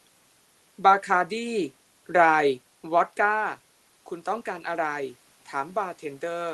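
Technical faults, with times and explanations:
The speech arrives as an ordinary WebRTC call-path signal, its upper range ending at about 12 kHz in a way that points to an Opus link at around 24 kbps, with no technical fault present.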